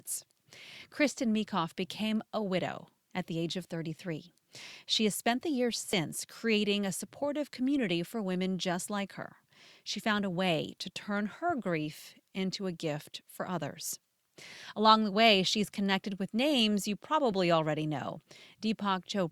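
Dropped buffers (overruns) occur at 5.93 s, after "has spent the years", and at 17.32 s, before "already know". Each is a jump, with the speech skipping ahead by roughly 20 ms and 10 ms, likely because samples were overwritten before being collected.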